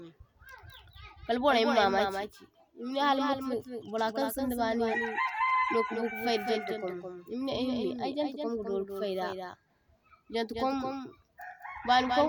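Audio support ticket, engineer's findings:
Doubled audio track across the whole clip: speech plus a second full-band copy trailing by roughly a fifth of a second, only a few dB down. Dry and flat, no decay. Likely a second capture path or a misaligned edit stacking two copies.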